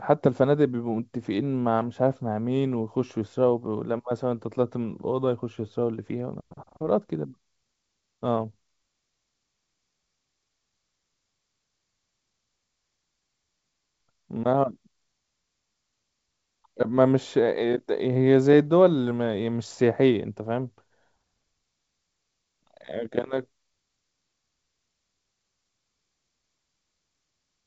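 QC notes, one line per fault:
Nothing to flag here: it's just speech carried over G.722 wideband telephone coding, with the top end stopping at about 7.7 kHz in a way that fits the 64 kbit/s mode.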